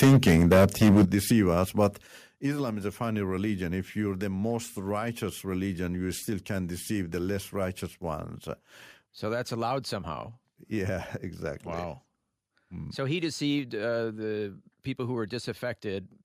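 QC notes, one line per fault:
0.02–1.05 s, microphone overload: The opening syllables up to "deceive us" sound harsh and crackly, driven roughly 11 dB past full scale, likely because the input volume was set too high. On the waveform, a large share of peaks are squared off flat; the spectrogram shows broadband smearing above each loud syllable.
0.04 s, 1.05 s and 2.07 s, microphone volume stepped down: Three sudden level drops of about 2 dB, 9 dB and 6 dB hit voice and background together. The largest falls just before "deceive us", right as the distortion ends, likely the call software cutting input gain after detecting clipping. The waveform envelope steps down abruptly at each point, and the spectrogram darkens uniformly across all frequencies.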